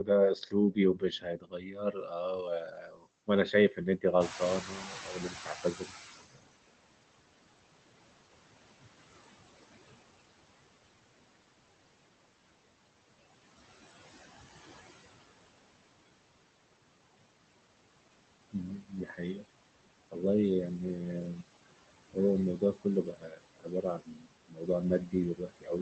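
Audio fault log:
Throughout: noise suppressor artifacts. The suppressor pulls down every band it judges to be steady noise, by about 20 dB, frame by frame. The background drops away in pauses and swells back under the speech.
0.0 s to 6.49 s, 18.52 s to 19.44 s, and 22.58 s to the end: speech cut by the noise suppressor. The suppressor mistook parts of the speech for noise and turned them down with the background. The deepest drops are about 22, 17 and 21 dB. Across roughly four seconds in the first stretch and under half a second in the second, soft consonants and word endings sound swallowed or faint.
4.2 s to 6.27 s: noise suppressor catching up. When the room noise jumps by about 16 dB around 4 s, the suppressor's noise estimate lags behind. For about 2.1 s the louder background leaks through with less reduction, then sinks as the estimate settles and the cut returns to about 19 dB.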